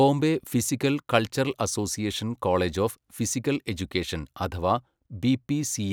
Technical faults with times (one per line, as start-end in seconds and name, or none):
none